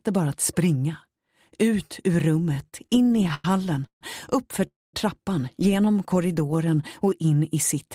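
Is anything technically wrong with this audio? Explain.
Yes, the audio has three kinds of network-playback fault.

From 2.54 to 3.45 s there are repeated stalls (stutter). Packets kept arriving late or more slowly than they were played out, so the jitter buffer emptied about eleven times in under a second. Each time, the receiver stretched the last sound until more data arrived. Those fills total about 250 ms, roughly a quarter of that stretch, with the longest near 97 ms. Nothing is lost, but the sound drags and catches in short hitches.

Two call audio freezes follow, at 3.86 to 4.02 s and 4.67 to 4.94 s. The likely cause is packets being held up in transit until the jitter buffer ran dry. The receiver carried the last sound forward briefly, then it decayed to silence, about 110 ms in the first freeze and about 210 ms in the second. Playback then resumes where it stopped, so gaps of roughly 150 ms and 265 ms are inserted without anything being cut.

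From 5.85 to 7.11 s there is a jitter buffer slow-down. With its reserve low, the receiver rebuilt it by repeating single pitch periods and fragments of pauses many times over. That adds about 141 ms, so the passage plays at about 89% speed while the pitch stays put. Sounds come out drawn-out and slightly sluggish.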